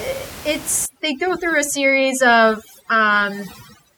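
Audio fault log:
0.86 to 3.97 s, overdone noise removal: bands near the noise estimate are driven down or off, so the background breaks into twinkling, warbling specks and quiet parts of speech vanish.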